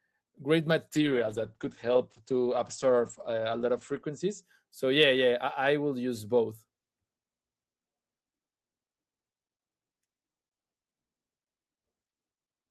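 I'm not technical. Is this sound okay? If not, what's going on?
No. From about 0.94 to 4.49 seconds there's a call bitrate drop. The call's connection judged it had less room, so the system squeezed the voice into far less data for a while, staying at its lowest for about 3.1 seconds. To cope, it drops detail and throws away the crisp upper sounds above roughly 8 kHz. The speech turns muffled and rough, then clears once the data flow recovers.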